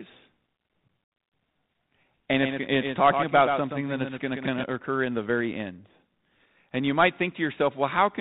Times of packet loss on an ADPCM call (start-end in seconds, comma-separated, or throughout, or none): 1.04-1.20